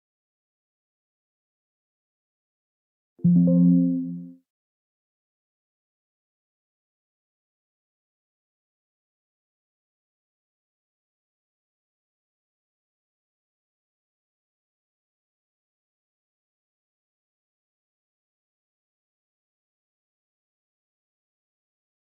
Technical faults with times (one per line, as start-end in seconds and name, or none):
none